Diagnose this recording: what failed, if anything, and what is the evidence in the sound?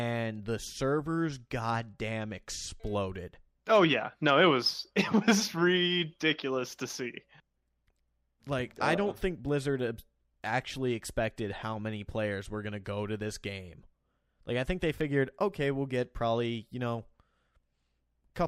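At 15.01 s there's a single sharp click in the speech, a hairline tick rather than any gap, and it looks like dropped samples. A tiny sliver of the stream, a fraction of a millisecond, simply isn't there, so the waveform steps straight from one value to a later one, and that discontinuity is the click. The likely culprit is the driver or buffer stage hiccuping once and skipping a handful of samples.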